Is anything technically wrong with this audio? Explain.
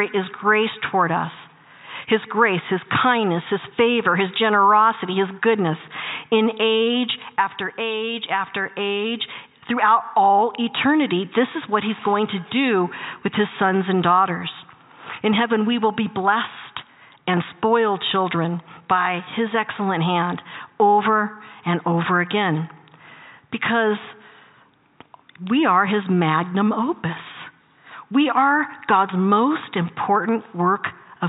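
No, nothing technically wrong stood out on listening to this audio.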